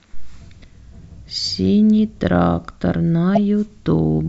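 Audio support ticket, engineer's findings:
Corrupt frame decoded, 3.35–3.38 s: short loud burst in the speech, peaking around -5 dBFS. Probable component: codec decoder. Flipped bits in about two compressed frames were decoded anyway, so misread gains and codes put energy at wrong frequencies.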